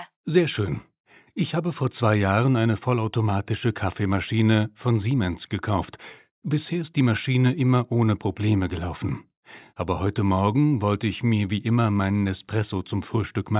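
No technical faults can be heard anywhere in this recording.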